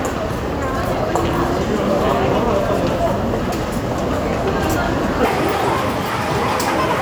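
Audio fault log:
5.25–7.02 s, section at the wrong speed: the sound jumps to 1.73 times normal speed, rising close to ten semitones and hurrying, likely from playback against a mismatched clock. A spectrogram shows every band shifted upward and time-compressed; the waveform packs visibly denser.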